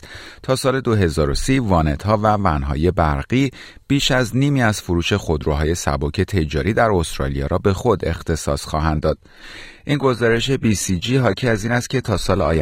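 Speech clip. At 8.95 s the sound suddenly drops in quality, with no gap, and stays that way to the end. Nothing remains above 14.9 kHz, and codec artefacts rise. This is an adaptive stream at a lower bitrate, which fits a switch from about 96 kbit/s AAC to about 20 kbit/s HE-AAC after the connection slowed.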